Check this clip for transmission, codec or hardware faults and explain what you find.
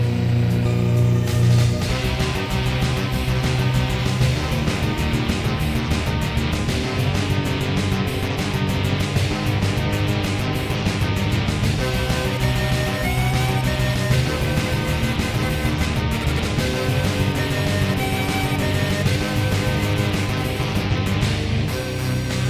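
I find no transmission, codec or hardware faults to report in this clip.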